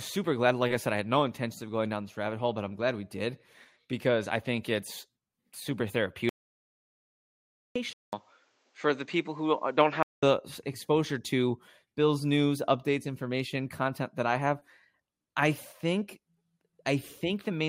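A speech clip with two faults. At 6.29 s the sound cuts out completely. It stays dead until 7.76 s, a gap of about 1.46 s. This is an audio dropout to silence. The gap is silent, with no room tone at all. Whatever was said in that stretch is lost. The likely cause is the input dropping out while the recorder kept writing silence. From 7.93 s to 10.23 s the input appears to have switched to a poorer device. Nothing is heard above 8.3 kHz, so the speech turns duller and narrower. The level hardly changes. A new, faint background noise sits roughly 45 dB below the speech. About 200 ms of silence marks the changeover. The likely cause is the system swapping to another microphone mid-recording.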